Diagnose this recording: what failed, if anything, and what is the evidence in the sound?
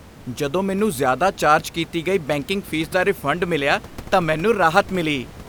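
Nothing failed here; the only thing to hear besides the speech is the ordinary background noise of the room, sitting about 20 dB below it, which is just part of the recording.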